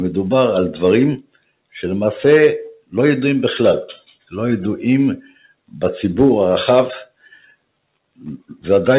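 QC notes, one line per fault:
Throughout: noise suppressor applied to music or sounds. A speech-tuned suppressor stays on and keeps treating steady, sustained parts as noise, so the level breathes by around 5 dB. Held material and tails sag while attacks punch through, giving a pumping, thinned feel.
1.18–1.75 s, 2.75–2.93 s, 3.97–4.33 s, 5.22–5.78 s, 7.06–7.64 s, 7.94–8.64 s: sound cut by the noise suppressor. At each spot the suppressor clamps down hard, by about 15 to 21 dB at worst. Sustained or decaying sound sinks or gets its tail chopped, while the band-limited call path keeps everything under 4 kHz.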